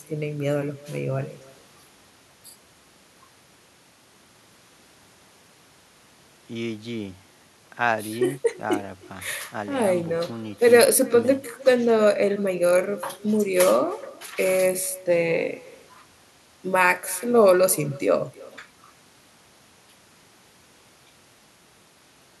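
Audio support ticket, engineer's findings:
Faint, thin copy of the speech trailing each phrase by roughly a third of a second, about 23 dB down, throughout. Echo with no canceller: far-end loudspeaker output re-captured by its microphone and returned over the network round trip without echo cancellation.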